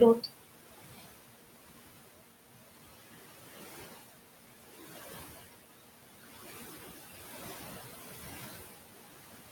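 Noise suppressor artifacts run through the whole speech clip. The suppressor pulls the room noise down by about 16 dB in pauses, then lets it swell back under speech. Unlike a gate's hard on-off cut, it works band by band.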